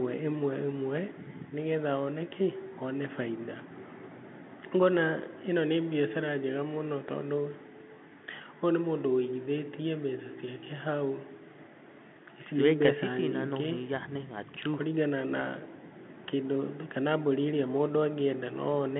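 From start to finish the speech carries the signature of a Bluetooth CVSD headset codec. The band runs from about 150 Hz to 3.5 kHz with nothing above 3.8 kHz, and the coding damage is plainly audible, which fits a 64 kbit/s CVSD link. The one-bit up-or-down coder cannot track fast, loud high-frequency movement, so s sounds come out scratchy and a granular hiss sits beneath the speech. The call microphone's high-pass filter also takes out the lowest bass, which is normal.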